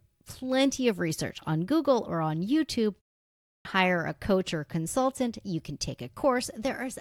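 At 3.35 s, after a pause of 0.42 s, the speech comes back with a clipped start after a pause: the output path had dropped into an idle state during the gap and needed time to wake and lock again before passing audio. About 300 ms, up to 3.65 s, is swallowed, so the next speech begins abruptly out of silence with its opening sounds missing.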